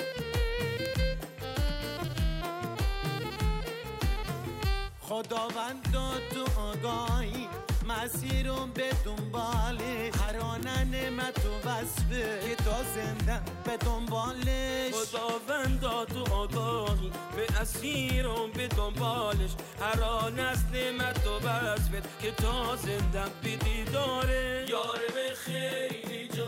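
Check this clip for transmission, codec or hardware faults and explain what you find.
Eight bit error spikes turn up, at 0.86, 2.04, 7.06, 10.63, 18.09, 19.73, 21.15 and 24.68 s. Each is a flipped bit throwing a sample or a few off by a power of two, heard as a sharp broadband tick unrelated to the sound. They reach about −11 to −29 dBFS.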